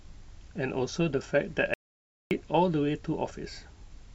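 At 1.74 s the speech cuts off mid-flow and nothing returns until 2.31 s: an audio dropout to silence lasting about 0.57 s. The gap is silent, with no room tone or hiss underneath, and whatever was said there is gone. The likely cause is the input being lost briefly, through a disconnect, failed link or accidental mute, while recording carried on writing silence. A natural pause or noise gate would leave some background, and packet-loss concealment would fill the gap with smeared sound.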